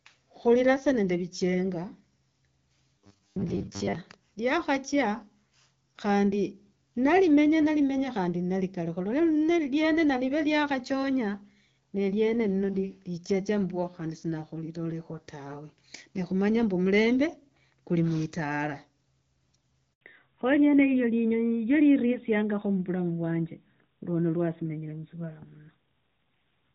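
A speech recording carried over a mobile call, with three distinct faults. From 2.98 to 3.95 s the voice becomes robotic, a rigid metallic buzz at 100 Hz that still loosely tracks the speech; this is likely the playback repeating short buffers because new audio arrived too seldom, with most of the stretch filled by repeats, which fits a 10 ms buffer. At 19.93 s a handover gap cuts the sound out for 80 ms as the call switches networks and no frames arrive, so that portion is lost. From 20.01 s to the end there is a fallback to narrowband: the call drops from AMR wideband (HD Voice) at 12.65 kbit/s, which before this point gives clear speech with only light codec damage, to AMR-NB at 12.2 kbit/s, removing everything above 4 kHz and leaving the voice duller and rougher.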